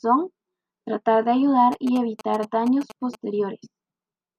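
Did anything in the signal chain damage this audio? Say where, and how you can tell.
Yes. GSM signalling bursts hit the analogue wiring, 1.72 to 3.15 s. Galloping ticks and 217 Hz buzz. A nearby phone's radio pulses get rectified.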